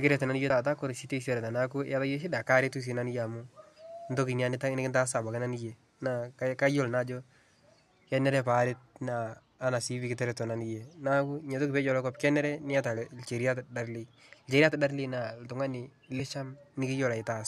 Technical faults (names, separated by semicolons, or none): damaged data in a compressed stream